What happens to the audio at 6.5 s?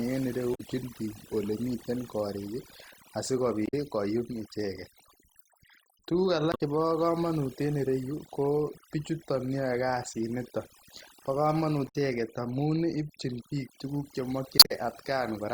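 From 6.49 to 6.61 s, damaged data in the compressed stream makes the decoder misread frames and lose sync. It resyncs at the next frame header, leaving a brief chirp or squawk. Overdone noise removal also runs through this moment. Bands near the noise estimate are cut, so the background drops and breaks up into twinkling specks.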